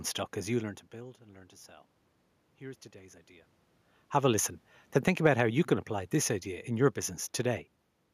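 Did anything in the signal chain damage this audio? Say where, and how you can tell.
Yes, in the call processing. From 4.94 s to 7.09 s there's automatic gain falling. The AGC eases its gain down by about 4 dB, and the room noise sinks right along with the speech, so it isn't the talker shifting position like earlier on.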